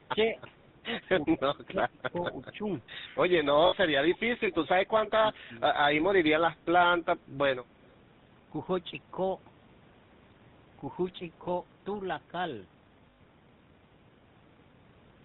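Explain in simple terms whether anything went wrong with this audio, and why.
Several things went wrong. The whole call passed through the GSM full-rate codec, the original mobile phone coding method. It rebuilds the voice from a simple model of the throat and mouth, driven by sparse pulses, and throws away everything above 4 kHz. Throughout the recording, the speech sounds buzzy and gravelly, with a plainly audible roughness and no crisp top end.

There were also six short stretches where the talker's voice sinks, thins out or breaks up: 0.1 to 0.37 s, 1.6 to 2.76 s, 3.41 to 4.23 s, 4.5 to 4.91 s, 5.15 to 5.5 s and 6.61 to 7.31 s. The likely cause is speech suppressed in double talk. Both people spoke at once, and the echo canceller could not tell this voice from the returning echo, so it turned the voice down. The dip near 4 s is also one of the deepest.

Finally, there are two moments of lost GSM frames, at 3.66 to 3.75 s and 13.1 to 13.21 s. 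Pieces of the signal went missing in transmission, and the phone filled each gap by repeating the last good sound. Instead of a clean gap, you hear a brief metallic, ringing smear. The second lasts about 100 ms, noticeably longer than the first, at about 60 ms.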